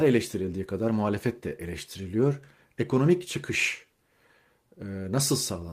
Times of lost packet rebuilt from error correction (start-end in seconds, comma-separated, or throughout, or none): none